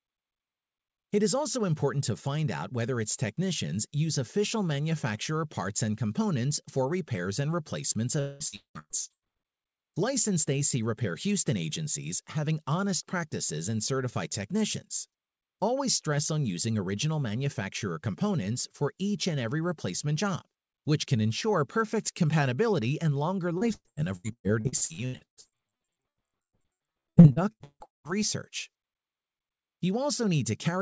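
Speech turns choppy and robotic from 8.20 to 9.25 s, after "for repairs and replacements", and again from 23.58 to 28.12 s, after "perfect compatibility and longer". This is repeated packet loss: gaps of up to 200 ms keep getting patched by stretching the previous sound, so more than half of each stretch is filled in rather than real. The call path's bandwidth ends at 8 kHz, which fits a wideband call codec.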